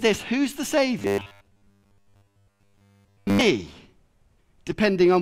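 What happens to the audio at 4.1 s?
Nothing goes wrong at 4.1 s; the speech there plays through intact, with no dropout, click, distortion or other fault.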